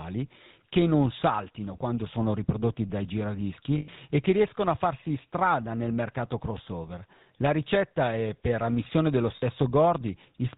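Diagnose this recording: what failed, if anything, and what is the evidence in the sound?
The codec stage failed. The whole speech clip carries a buzzy, gravelly roughness, and nothing comes through above 4 kHz. That is the signature of the GSM full-rate codec, at a rate that fits its 13 kbps. The codec models the vocal tract as a filter. It drives that filter with a sparse, regularly spaced pulse train, keeping only a third of the excitation samples. The coarse excitation produces the grit. The band limit dulls the top end.

Lost GSM frames add two network-stage faults. The first runs from 3.78 to 3.89 s, about 100 ms. The second runs from 9.36 to 9.43 s, about 60 ms. Each sounds like a brief, rough metallic ring, with the speech frozen in place and not moving on. The decoder received no good data there. It reused the parameters of the last good frame.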